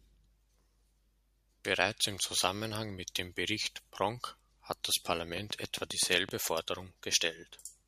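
A speech clip carrying a train of clicks: from 5.37 s to 6.30 s, right after "hat das", a steady ticking runs over the voice, about seven sharp pops of much the same shape at an even 7.7 clicks per second, standing roughly 10 dB above the speech. The regular pace and matching shape point to a repeating external pulse, likely interference from nearby equipment or a faulty connection or power supply, rather than anything in the recorded sound itself.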